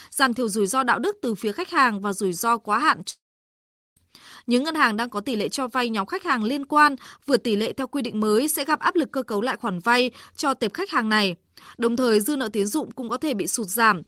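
A long network dropout runs from 3.10 to 3.97 s. The last sound trails off as a short fading buzz or hiss, then 0.77 s of silence, and speech resumes with 0.86 s lost, likely because no packets arrived and the receiver filled the gap.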